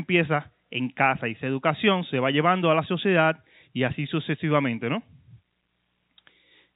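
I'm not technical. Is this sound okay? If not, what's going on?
Yes, nothing is wrong here.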